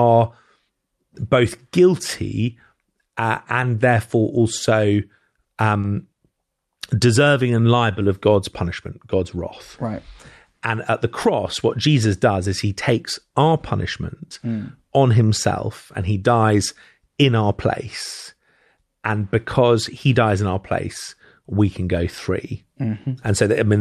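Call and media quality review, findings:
Repeated stalls (stutter), 5.19 to 6.20 s, right after "uh and therefore also". Jitter buffer ran dry five times, gaps up to 40 ms filled by continuing the sound, 120 ms total, nothing lost.

Jitter buffer slow-down, 7.22 to 8.30 s. Playout stretched to 92% speed by repeating pitch periods, adding 95 ms to rebuild the buffer. Same pitch, just draggy.

Jitter buffer speed-up, 10.53 to 12.47 s, leading into "is he takes our". Buffer overfull, so short pitch-period chunks got dropped, around a tenth of a second. Runs at 105%, sounds a bit rushed.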